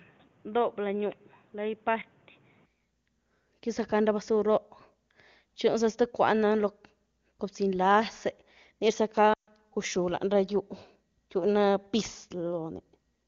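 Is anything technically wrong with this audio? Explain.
Yes, there are two things worth flagging.

From the very start to about 2.66 s, the audio is band-limited, with nothing above about 3.8 kHz. It also sits roughly 5 dB quieter, with a new noise floor about 35 dB under the signal. At 2.66 s it snaps to full bandwidth with no gap. That pattern is most likely an input switched to a poorer device, something like a headset on its call profile, which passes a narrower band and brings its own level and hiss.

Around 9.33 to 9.50 s there's a stretch of lost AMR speech frames, about 140 ms in total, which fits a run of seven 20 ms frames. When frames fail their check, the decoder keeps replaying the last good pitch and vocal tract settings at falling gain. Here the sound drops quickly to near silence, since wideband concealment ramps down fast, and it comes back briefly weak or rough. The surrounding wideband sound is clean, consistent with AMR-WB at a high rate.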